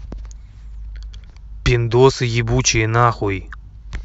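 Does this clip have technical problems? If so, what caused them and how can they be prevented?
No, nothing in this one sounds wrong from a technical point of view, so there's no cause to track down and nothing in particular to prevent.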